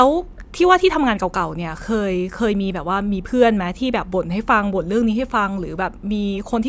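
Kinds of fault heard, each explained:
Nothing here stands out as a technical fault; it's just speech coming through as you'd expect.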